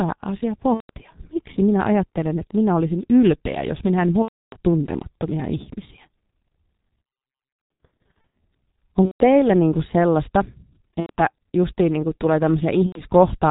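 Speech runs through a G.723.1 codec for its whole length. The muffling and hoarseness, with nothing above 4 kHz and smeared consonants, point to a heavily compressed stream near 6.3 kbit/s. On a spectrogram this appears as a hard ceiling at 4 kHz and blocky, coarse formant bands that change in 30 ms steps. VoIP packet loss concealed by the speech codec occurs at 0.74–0.91 s, at 4.22–4.57 s after "ylpeä jos minä en", at 7.65–8.33 s, at 9.06–9.22 s before "niin kuin sellaista", at 11.00–11.11 s and at 12.86–13.01 s after "kuin niinku tulee". During each gap the decoder repeats its last pitch and filter at falling gain, so the sound turns into a fading buzz. The 7.65 s stretch is scattered dropouts whose longest run is about 90 ms. On a spectrogram these show as smeared, evenly spaced harmonics, and on a waveform as a decaying envelope.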